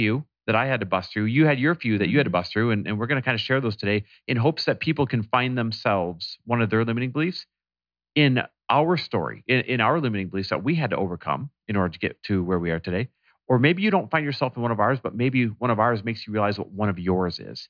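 Nothing in the speech recording stood out as a technical fault on listening.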